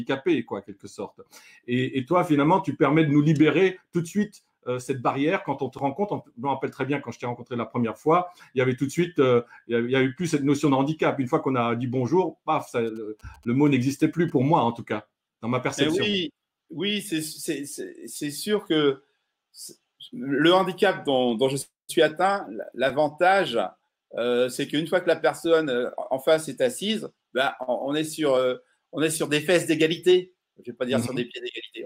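From 12.87 to 14.30 s, GSM signalling bursts from a nearby 2G phone are rectified by the audio circuit, adding a faint galloping dit-dit-dit of short 217 Hz buzzes, well below the main sound.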